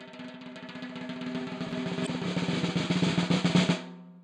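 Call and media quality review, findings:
Chunks out of order, 1.69–1.72 s: brief jumbled stretch with three hard joins. A 10 ms chunk was queued late and plays two chunks after its slot, likely from jitter-buffer or write-ordering logic. No audio missing, which separates it from a dropout.

Damaged data in a compressed stream, 2.03–2.08 s: short chirp or blip. Corrupt bytes in the encoded stream make the decoder misread frames, lose sync and resync at a later header.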